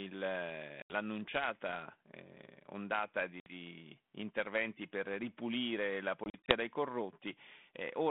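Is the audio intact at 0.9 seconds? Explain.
No. Packet loss on an ADPCM call cuts a hard-edged hole of about 80 ms from 0.82 to 0.95 s. Unlike a plain dropout, the sound returns slightly distorted while the decoder's predictor resynchronises.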